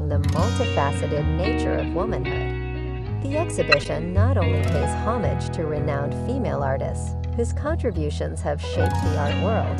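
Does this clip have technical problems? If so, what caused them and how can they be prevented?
Yes. Three short blips of misplaced noise: a loud burst from 3.72 to 3.86 s spanning several frames, a faint tick at 7.93 s, and a quieter squeak from 9.26 to 9.29 s. These are corrupt frames decoded: flipped bits in the compressed stream made the decoder misread gains and codes, putting energy at the wrong frequencies for each damaged frame. Error checking on each frame, with concealment instead of decoding damaged frames, would prevent it.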